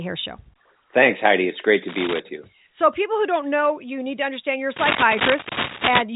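Cable scratch noise hits this telephone-band speech recording from 1.88 to 2.20 s, after "great to", a little below the speech level, and from 4.76 to 6.02 s, after "to understand you're a", about as loud as the speech. Both bursts are dense rustling, likely from a worn cable or connector whose contact resistance flickers as it moves.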